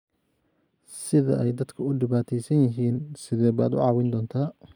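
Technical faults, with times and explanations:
2.96–3.62 s, drift correction step: the speech slows by 6% and drops 108 cents, just over a semitone, then snaps back. This is likely a clock-matching playback-rate change made to rebalance a buffer. On a spectrogram the harmonics step down together, and in the waveform the periods visibly stretch.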